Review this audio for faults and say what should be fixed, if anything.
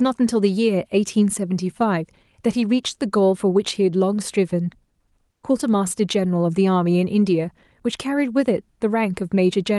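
Comfort noise in place of the background at 5.31–5.43 s: for about 120 ms the faint background, about 51 dB below the loudest passages, becomes a steady, featureless hiss about 2 dB quieter. Likely Opus DTX halted transmission in the pause and the receiver synthesised filler noise. Disabling DTX on the sending side would prevent this.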